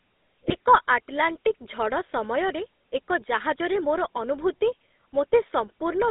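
Throughout, the GSM full-rate codec gives the speech a plainly audible buzzy, gravelly roughness. A spectrogram shows energy only between 250 Hz and 3.7 kHz, consistent with a 13 kbps coder. From 0.48 to 0.53 s, GSM bit errors corrupt about two frames of decoder values, causing a brief squawk. The waveform shows a short distorted burst there.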